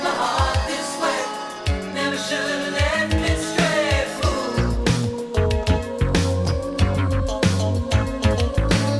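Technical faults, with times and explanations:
Nothing stood out as a technical problem on listening.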